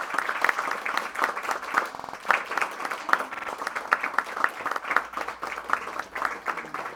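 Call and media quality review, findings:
Repeated buffer at 0.46, 1.95, 3.34 and 4.74 s: playback underrun replays a 46 ms chunk one to four times with hard joins, fitting a 2048-sample buffer.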